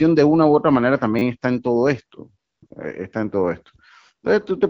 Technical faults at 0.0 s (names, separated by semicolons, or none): none